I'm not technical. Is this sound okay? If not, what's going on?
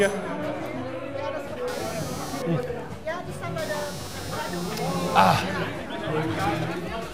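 No. From about 1.68 s to the end there is computer activity noise: a buzz of roughly 200 pulses per second, clearly quieter than the sound itself. The computer's processor or graphics workload is disturbing the shared electrical ground and leaking into the audio.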